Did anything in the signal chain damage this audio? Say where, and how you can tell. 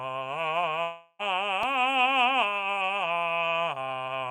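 Yes, two spots. The bigger one is at the network stage, and it's most likely a long network dropout running from about 0.83 to 1.22 s. The music stops arriving, and the receiver keeps extending the last sound as a buzz or hiss that fades away over roughly 0.36 s. You get about 10 ms of true silence right at the end before the music resumes further along. Whatever was played in that stretch is simply gone.

The second is tiny: a block of digital silence at 1.63 s, only 0.73 ms long, which fits a block of about 32 samples. That points to the driver or buffer stage. A run of samples got replaced by zeros with no fade on either side. At that length, what you hear is a short tick rather than a gap.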